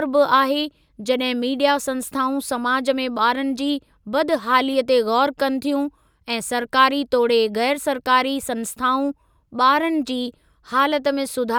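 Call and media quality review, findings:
Nothing stood out on listening to the speech recording.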